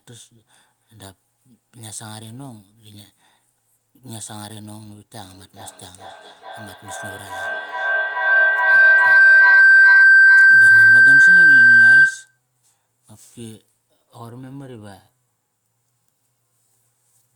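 From 5.22 s to 12.41 s the speech is swamped by feedback howl. A microphone is evidently picking up a loudspeaker carrying the same call, and each trip round that loop comes back louder, so the repeats pile up rather than decay. They settle on a tone near 1.5 kHz that pulses roughly every 400 ms and peaks at about 24 dB above the speech. On a spectrogram this shows as a bright horizontal line beaded at that interval. The waveform swells into a dense block before it cuts off.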